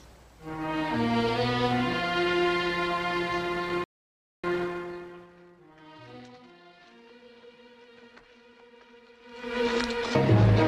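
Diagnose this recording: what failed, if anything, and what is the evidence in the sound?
Playback stage. A playback stall silences the sound mid-flow from 3.84 to 4.44 s, about 0.59 s. The cause is likely a player that ran short of buffered data or had its output thread blocked.

Time-compressed catch-up follows, also at the playback stage. From 4.44 to 6.80 s the audio runs hurried at about 1.25 times normal speed, with unchanged pitch. The player is trimming its backlog by cutting short slices and cross-fading the joins.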